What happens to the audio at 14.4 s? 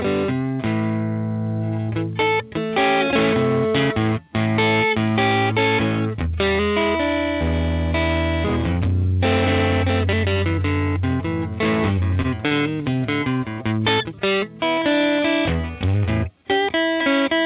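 The sound hangs for a moment, from 14.39 to 14.44 s. About 31 ms is drawn out with a faint buzzy dip. This is a short stall from a late packet: the jitter buffer ran dry, the receiver stretched the last sound, then resumed where it left off. Nothing is lost, but everything after runs 31 ms later.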